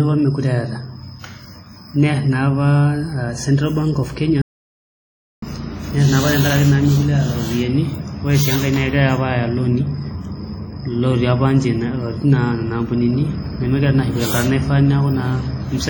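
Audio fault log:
throughout: WMA compression, likely at a low bitrate around 32 kbps. The speech rings and sounds washy, and a hiss swells and fades with the voice as long transform blocks smear quantisation noise over time. Unlike a plain low-pass, content still reaches about 20.1 kHz.
4.42–5.42 s: audio dropout to silence, lasting about 1.0 s and ending just before "nerr naa". The sound cuts to silence with no room tone, likely because the input was lost while recording continued. Unlike packet-loss concealment, nothing fills or smooths the gap.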